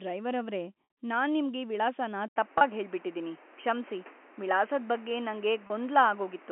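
Packet loss with pitch repetition at 0.84 s, between "ಡ್ರೈವರ್ ಅವ್ರೇ" and "ನಾನ್ ನಿಮ್ಗೆ": about 60 ms of audio went missing, which fits two lost packets. The receiver filled the gap by repeating the last pitch period and fading it, so the sound briefly holds with a buzzy, frozen quality before the speech resumes.

At 2.28 s an input switch to a poorer device begins and lasts to the end. This is likely a change to another microphone. An 80 ms silence marks the switch. After it, nothing passes above 3.2 kHz, so the sound turns duller. The level shifts by a few decibels, and a new background noise sits roughly 30 dB below the signal.

Packet loss with pitch repetition recurs at 2.58–2.61 s and 5.67–5.70 s. Each time about 30 ms was lost, consistent with a single packet. These shorter gaps are bridged by the repeated pitch cycle and are heard as a slight buzzy hold.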